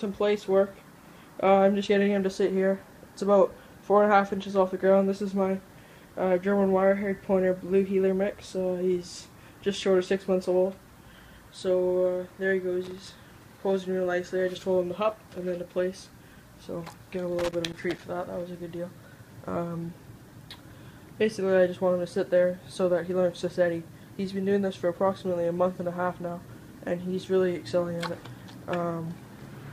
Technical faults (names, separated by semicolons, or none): loose connector crackle